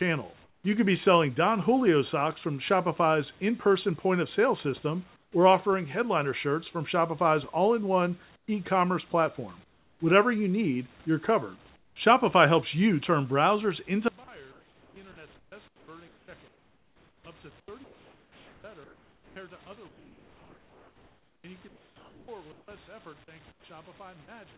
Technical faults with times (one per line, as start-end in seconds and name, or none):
0.44-0.64 comfort noise in place of the background
5.16-5.32 comfort noise in place of the background
8.36-8.48 comfort noise in place of the background
9.64-10.00 comfort noise in place of the background
11.76-11.96 comfort noise in place of the background
14.08-24.57 one channel inverted
14.52-19.36 sound chopped by the voice detector
19.88-22.68 comfort noise in place of the background
23.52-23.64 comfort noise in place of the background